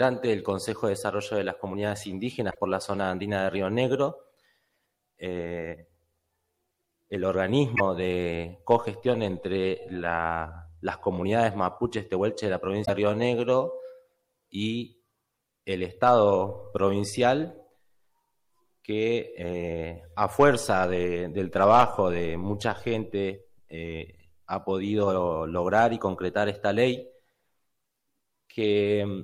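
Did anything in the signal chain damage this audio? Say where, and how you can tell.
Yes: the sound skips with brief glitches at 2.50–2.58, 7.75–7.81 and 12.84–12.90 s, likely a broken MP3 bit reservoir after cut frames, each glitch spanning a few 26.1 ms frames.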